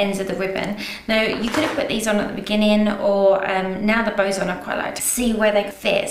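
From start to finish, overlap-add ripple: windowed frames were rejoined with an overlap that doesn't sum to constant gain, so level dips by about 6 dB once per frame, around 200 times a second. The result is a rough, buzzy flutter, steadier and more mechanical than a musical tremolo.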